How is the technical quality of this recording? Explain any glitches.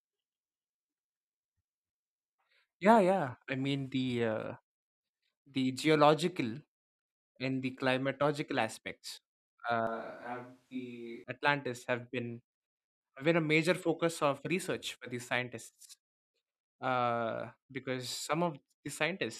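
One glitch affects the recording. From 9.87 to 11.24 s there is a switch to a distant microphone, likely because the close microphone's signal dropped out. The speech abruptly turns roomy and hollow, loses bass, falls by roughly 5 dB, and lets room noise rise to around 35 dB below the speech, then snaps back.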